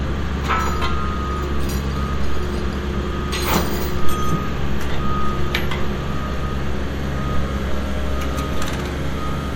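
No technical faults are audible.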